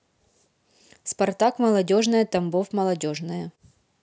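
No faults detected anywhere in the speech recording.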